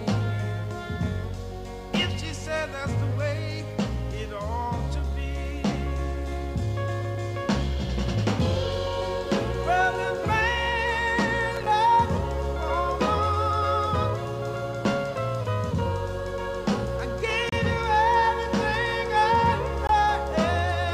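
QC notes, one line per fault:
11.56 to 11.66 s, processor overload crackle: for about a tenth of a second the sound breaks into a gritty crackle. The processor was falling behind and missing the deadlines for its small audio buffers, and each miss drops out as a short stretch of silence with hard edges on both sides. The spacing of the dropouts fits buffers of around 5 ms, with a handful missed in quick succession. Those rapid on-off cuts are what you hear as crackle, and it stops as soon as the load eases.
17.49 s and 19.87 s, gap at a join of encoded pieces: two short holes open in otherwise continuous sound, about 31 ms at 17.49 s and about 21 ms at 19.87 s, and each time the audio picks up right where it left off. These look like joins between separately encoded chunks where nobody trimmed the encoder's start-up delay or the padding on the final frame, so that silence ended up in the middle. 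The codec smears the edges, so the silent part is shorter than the full gap.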